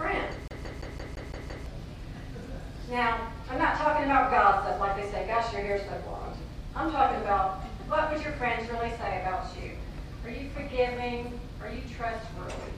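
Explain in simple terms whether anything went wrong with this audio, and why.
A CD stuck on one turn is audible from 0.48 to 1.66 s. A scratch kept knocking the laser back one track, so the same slice of about 0.17 s plays seven times, with a tiny silent gap at each jump. This creates that quick, even stutter.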